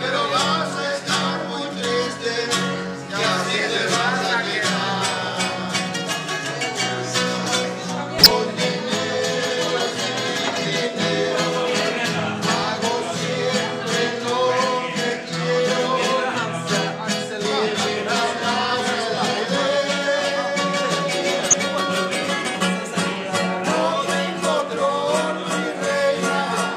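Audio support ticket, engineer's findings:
Corrupt frame decoded at 8.18 to 8.31 s. Burst of misplaced energy, about 0.13 s. Length fits a handful of damaged codec frames. Decoder played bad bitstream data instead of concealing it. Misread gains and codes put energy at wrong frequencies.

Second corrupt frame decoded at 21.45 to 21.54 s. Same kind of burst, about 0.09 s. Points to a few corrupted frames. Probable component is the decoder's missing error check.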